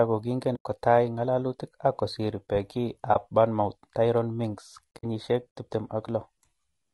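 Speech recorded through what is likely low-delay AAC compression, which fits AAC-ELD at a low rate around 32 kbps. The voice is plainly rough and grainy, with noise filling the gaps between pitch harmonics and a thin, synthetic-sounding top band. That graininess, rather than the swirly, watery artefacts of ordinary low-bitrate AAC or MP3, comes from the low bitrate, which leaves too few bits to code the spectrum cleanly. Three muted gaps, two soft-edged holes and one brief dip, are AAC frame loss with muting, where the decoder zeroed the missing frames: 0.55 to 0.66 s (about 100 ms), 3.13 to 3.16 s (about 20 ms) and 4.98 to 5.04 s (about 60 ms). The sound fades out and back in across the overlapping windows. That smooth edge separates these from hard digital dropouts or buffer underruns, which cut abruptly and pop.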